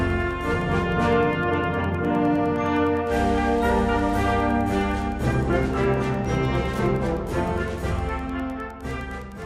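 Wi-Fi interference runs through the whole clip. A nearby Wi-Fi radio sends a beacon every 102.4 ms. The audio circuit picks it up and rectifies it. The result is a steady ticking, about ten times a second, roughly 35 dB below the sound.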